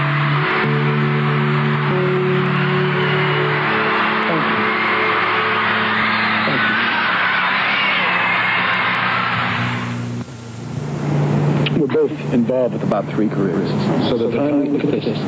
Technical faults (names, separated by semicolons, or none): gain pumping; doubled audio track